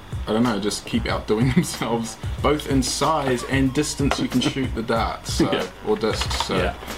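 Timecode bleed runs through the whole clip: a steady chirping warble sits about 30 dB below the audio, flipping between tones near 1 kHz and 2 kHz. Its rhythm fits 23.976 fps linear timecode leaking in from an adjacent track or cable.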